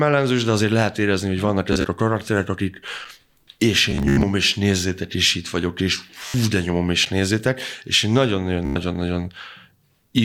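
At 1.73 to 1.85 s there is Bluetooth stutter. Late or lost packets make the receiver replay its last short slice, so about 58 ms of sound is replaced by a brief buzzing repeat, and playback then skips ahead. At 3.05 s, just after "a karakterek akik", a gap between chunks leaves a 6.5 ms hole of silence where two stored chunks meet. The stutter returns more heavily at 3.91 to 4.23 s, where about 200 ms is lost, with the longest run near 87 ms heard as a machine-gun rattle. It recurs at 6.28 to 6.34 s, between "és itt vagyok és" and "de nyomom és nézzétek". A second 6.5 ms chunk gap falls at 7.05 s, 4 s after the first, which fits audio handled in 4-second chunks with padding or a late start at each join. Bluetooth stutter appears a final time at 8.65 to 8.76 s, after "nézzétek és én nagyon", where about 100 ms is lost.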